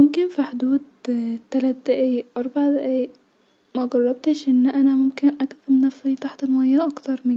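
No technical faults can be heard anywhere in the speech. The call path is audible as a top end that stops at 8 kHz, which is what a wideband call codec such as Opus leaves behind.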